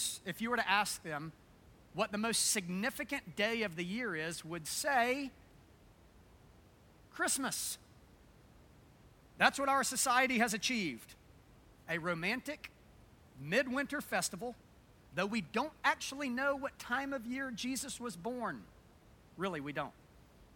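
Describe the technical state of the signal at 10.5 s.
At 10.5 s the signal is intact, with only the room's own background noise sitting about 26 dB below the speech.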